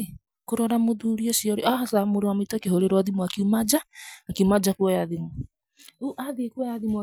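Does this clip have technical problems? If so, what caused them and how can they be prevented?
No, nothing stood out as a technical problem on listening, so there is no cause to trace and nothing that needs preventing.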